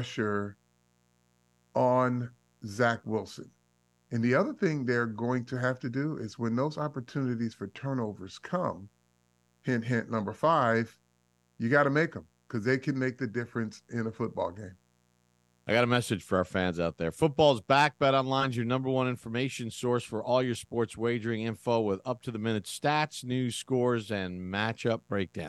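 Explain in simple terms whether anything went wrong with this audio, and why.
Something in the recording chain, likely a light dimmer, a power rectifier or a poorly shielded cable, let electrical interference from the 60 Hz power supply leak in. The result is mains buzz: a faint, steady, raspy hum running quietly underneath the speech throughout the clip.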